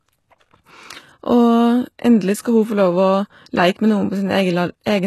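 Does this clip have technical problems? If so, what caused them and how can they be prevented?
Yes. Throughout, the speech has gritty, lispy treble with nothing above 12.3 kHz. This is likely HE-AAC compression, rebuilding highs from copied lower bands at a low bitrate near 16 kbps. To prevent it, encode at a higher bitrate or use plain AAC or Opus.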